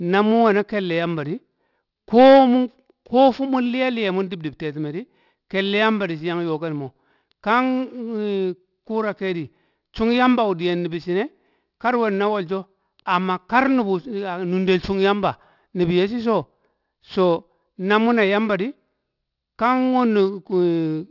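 A speech recording with aliasing throughout. Sibilants sound gritty and metallic. The spectrum runs hard up to 6 kHz and stops. Energy above that edge has folded back into wrong pitches, roughly 30 dB below the signal. This points to 44.1 kHz audio resampled to 12 kHz with no anti-aliasing filter.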